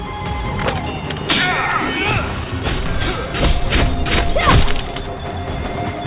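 No technical faults occur at any point in this clip.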